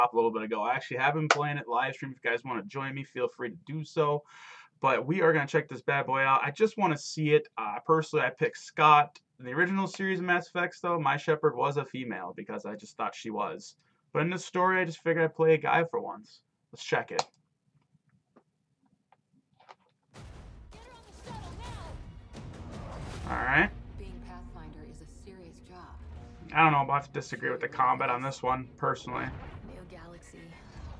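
No faults can be heard anywhere in this recording.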